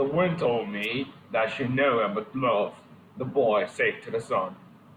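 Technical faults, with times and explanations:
0.82–0.86 s, wireless microphone noise hit: a brief burst of static about 40 ms long breaks into the speech. The analogue FM radio link faded for an instant as reflected signals cancelled, so receiver noise surged up as a short swish.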